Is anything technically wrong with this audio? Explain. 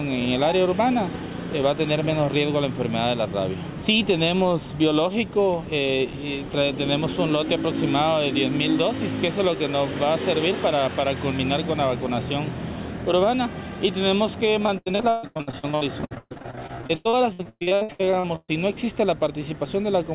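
Yes. From 14.66 to 18.50 s the audio suffers repeated packet loss (robotic sound). Packets kept going missing or arriving too late, and each hole was filled by extending the preceding sound. Gaps reach about 140 ms, and roughly half of this stretch is concealment rather than real signal. The result is choppy, robotic audio with pieces dropped out. The call path itself is band-limited to 4 kHz, consistent with a G.711 mu-law codec.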